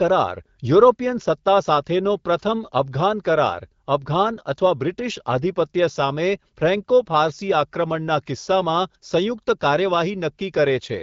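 Nothing stood out on listening to this speech, which carries the band-limited character of AMR wideband (HD Voice) coding.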